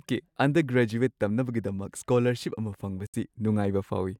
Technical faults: Bluetooth dropout

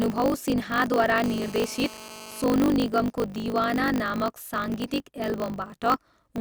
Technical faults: block size mismatch (truncated); GSM phone buzz

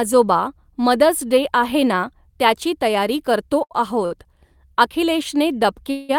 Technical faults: short stall from a late packet; call audio freeze

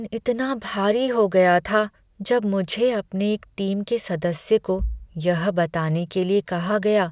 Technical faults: none

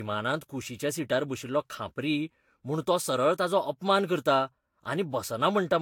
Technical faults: generation loss

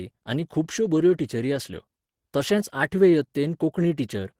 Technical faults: clock drift between sender and receiver; repeated timing corrections

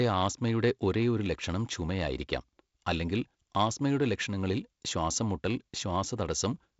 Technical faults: none

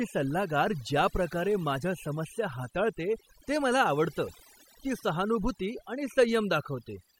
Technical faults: overdone noise removal

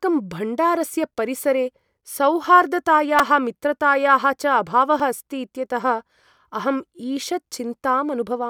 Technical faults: repeated buffer

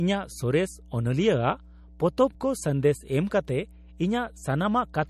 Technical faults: mains hum; MP3 compression

